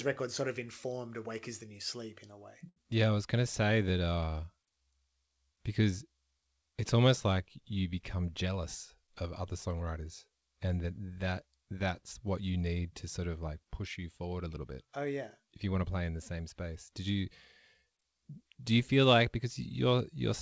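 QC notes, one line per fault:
2.69 to 2.78 s, short stall from a late packet: the sound is briefly held and drawn out, with a faint buzz or dip, as the jitter buffer ran dry and the receiver stretched what it had by 73 ms until the packet arrived. Unlike a loss gap, nothing is skipped and playback resumes exactly where it left off, now 73 ms later.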